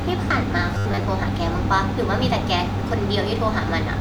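From 0.75 to 1.07 s the speech turns into a rigid metallic buzz fixed at 100 Hz: robotic sound from repeated short buffers, likely from a 10 ms block looping while about half the audio is skipped. Unlike stuttering, the repeats impose a buzz at a fixed rate.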